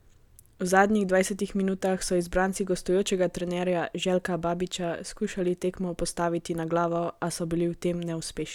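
No technical faults can be heard anywhere in the speech recording.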